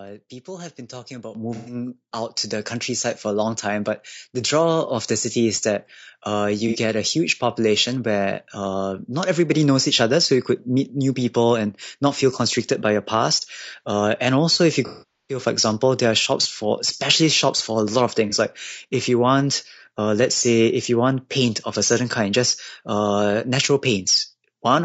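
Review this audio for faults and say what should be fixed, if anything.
Throughout the speech there is a rough, grainy texture, with noise filling the gaps between voice harmonics and a thin, synthetic-sounding top band. The likely cause is low-delay AAC compression (AAC-ELD) at a bitrate around 32 kbps. Its short frames resolve pitch poorly. Unlike ordinary low-bitrate AAC, the damage sits mainly in the harmonic structure rather than in pre-echo. Raising the bitrate or using a longer-frame codec mode would prevent it.

The microphone volume is stepped up twice. At 1.35 s, right after "have been talking about", the level rises by about 8 dB. At 2.37 s, just before "to the countryside for", it rises by about 3 dB. Voice and background jump together in a single step, unlike a compressor's gradual gain changes. Disabling automatic input-gain adjustment in the call software would prevent this.

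AAC frame loss with concealment appears at 1.55–1.75 s, 6.68–6.77 s, 14.87–15.40 s and 18.29–18.34 s. The decoder fills each gap by extrapolating the last good spectrum. The short gaps sound smeared and phasey. The 420 ms loss between "and also if you" and "for example there are" fades toward silence before recovering. A plain dropout would cut off abruptly instead. Forward error correction or a more reliable network path would prevent it.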